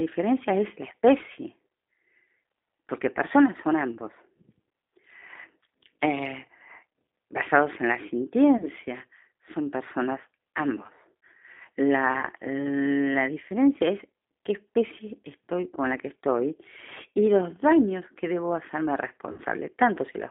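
From start to finish the speech has a narrow, slightly rough and synthetic quality, with nothing below about 250 Hz or above about 3.6 kHz. That is the G.729 codec, with damage plainly audible: each 10 ms frame is rebuilt from a vocal tract filter, a pitch predictor and a few pulses, and the sound points to the 8 kbit/s G.729A variant.

At 8.57 to 8.66 s and again at 12.20 to 12.27 s the speech briefly smears into a stretched, buzzy tone or coloured noise that sags in level, then takes a moment to regain its clarity. At 19.32 to 19.42 s the same happens for longer. These are VoIP packet loss concealed by the speech codec. About 30 ms went missing in each of the first two gaps and about 60 ms in the third, and the decoder filled them by extending its last pitch and filter at falling gain. Because each frame builds on the one before, the distortion lingers after the real audio resumes.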